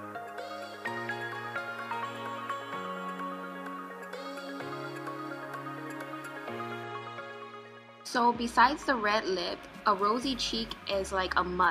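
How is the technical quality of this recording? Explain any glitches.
There's a problem early on. From 0 to about 6.8 s the sound turns grainy, with gritty distortion riding along with it, likely low bit depth without dither, roughly 9-bit rounding, leaving error only about 35 dB down.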